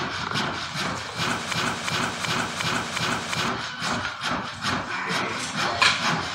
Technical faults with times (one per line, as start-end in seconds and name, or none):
1.53-3.48 broken-record loop